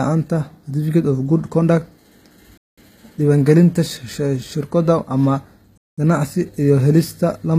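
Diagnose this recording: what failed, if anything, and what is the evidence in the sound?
Gritty, metallic treble with nothing above 14.9 kHz points to the codec stage, likely HE-AAC compression near 24 kbps rebuilding the highs from copied lower bands.

200 ms holes at 2.58–2.78 s and 5.78–5.98 s are a gap between chunks from playback or storage, with silence inserted where 3-second chunks join.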